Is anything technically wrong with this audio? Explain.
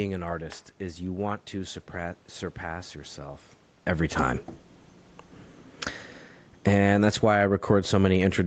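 Yes. From 6.52 to 7.41 s the automatic gain falls: the gain control judged the input too loud and pulled its gain down by about 15 dB over that stretch. Speech and background sink together, visible as a waveform envelope tapering steadily rather than dropping abruptly.

Overlapping this, from 6.83 s to the end, the automatic gain rises as the control decides the level is now too quiet and pushes gain back up. Speech and room noise swell together, seen on a spectrogram as the whole band, including the noise floor, brightening gradually.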